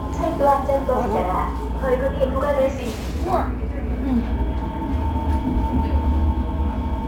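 Across the whole recording a fine hiss and grainy roughness rides on the sounds, swelling on loud and bright moments and dropping away whenever things go quiet. This is sample clock jitter: the converter's timing wanders by something like 5 microseconds, so each sample is captured a touch early or late. Fast-changing, steep parts of the waveform turn that timing slip into the largest errors, leaving noise roughly 35 dB beneath the sound itself.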